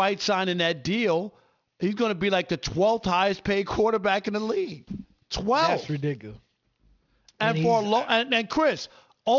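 Speech with aliasing throughout: sibilants sound gritty and metallic because energy above 6 kHz has folded back down as unrelated tones, roughly 20 dB below the speech, which fits a drop from 48 kHz to 12 kHz without anti-alias filtering. A spectrogram shows energy running hard up to a 6 kHz ceiling, with mirrored, inverted traces below it.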